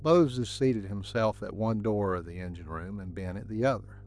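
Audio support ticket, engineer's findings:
Mains hum, 50 Hz, whole clip, start to finish. Steady low drone under the speech, sitting roughly 20 dB below it. Probable culprit: ground loop between interconnected kit, or a transformer/PSU parked too close to the mic or preamp. Power-line current leaking into the signal path. Check grounding and cable routing first.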